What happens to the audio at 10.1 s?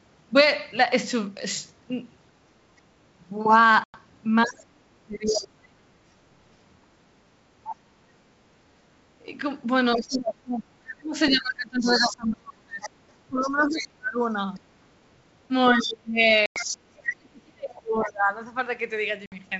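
Around 10.1 s the talker is inside a long stretch of speech suppressed in double talk, from 8.61 to 18.32 s. The canceller likely couldn't separate the talker from echo and turned everything down, with dips as deep as about 35 dB. Between 10.11 and 10.18 s there's a brief scrap of the other side's voice leaking through, about 15 dB under the speech, likely echo the canceller left behind.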